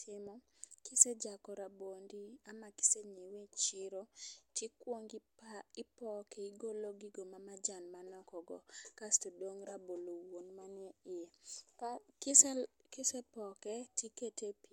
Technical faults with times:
none

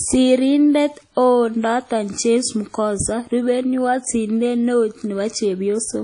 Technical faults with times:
0.00-6.04 WMA compression

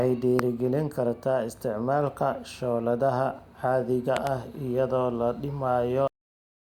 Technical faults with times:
0.39-0.41 loud pop
4.17-4.29 loud pop
6.08-6.80 cut-off end

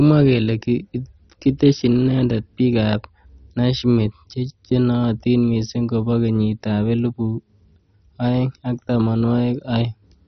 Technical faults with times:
0.00-10.28 MP2 compression

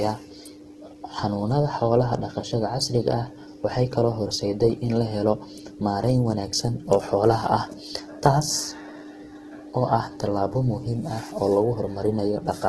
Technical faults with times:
0.00-12.69 Opus compression

